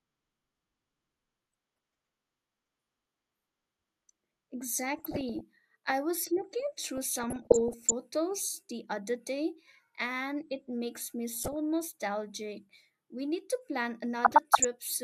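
DAB burbling hits this speech at 1.73–2.09, 4.97–5.41, 6.97–7.92, 11.33–11.54 and 14.24–14.65 s. Weak reception lets bit errors corrupt sub-bands. It puts short blips of noise into single sub-bands.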